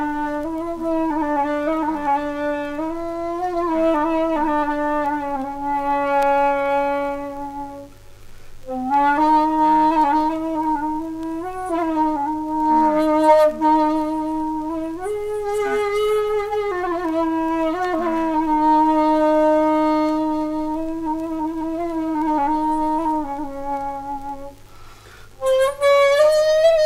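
A steady, raspy mains buzz sits under the audio for the whole clip, roughly 40 dB below the signal. It's built on 50 Hz with harmonics climbing into the kilohertz range, the kind of spiky interference a dimmer, rectifier or unshielded cable lets in twice per mains cycle.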